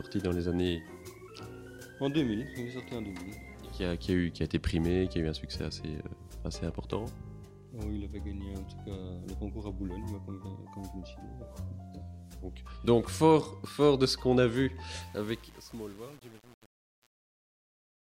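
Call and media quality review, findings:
Truncation distortion on the fade-out, 15.01–18.07 s. Fade gain stage or export requantizes without dither; grit fits roughly 7-bit resolution. The tail turns gritty. Unlike gate chatter or codec artefacts, the grit worsens as the level falls.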